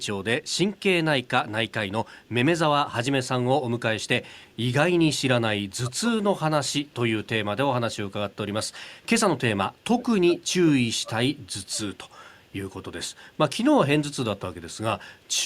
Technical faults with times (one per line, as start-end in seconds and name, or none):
0.03-2.29 echo leak
4.03-4.56 echo leak
5.60-6.85 speech suppressed in double talk
7.82-8.59 speech suppressed in double talk
8.70-9.80 echo leak
9.81-11.12 speech suppressed in double talk
11.37-15.37 echo leak